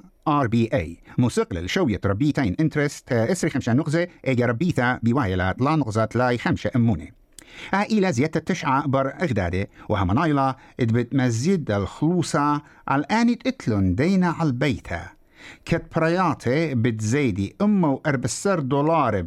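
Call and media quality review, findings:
Time-stretched section, 0.0–10.4 s. Speech rushed at about 1.62x pace, pitch unchanged, then abrupt return to normal pace. Likely a time-stretch stage squeezing audio to fit a length, dropping short pieces to hold pitch.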